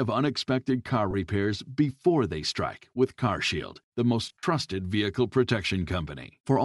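The whole clip carries plainly audible coding damage, likely from Bluetooth LC3 compression at a rate that fits about 48 kbps with short 7.5 ms frames. Sparse upper-band detail is replaced with noise, giving the speech a breathy, grainy edge throughout.

At 1.11 to 1.15 s, lost LE Audio frames left a 30 ms hole. The decoder patched it by repeating the last spectrum with scrambled phase, so the speech briefly turns to a short noisy smear. From 4.26 to 4.43 s, losses totalling 105 ms are scattered over 165 ms, the longest run around 50 ms. The concealment fades, so the speech repeatedly dissolves into hiss and dips toward silence.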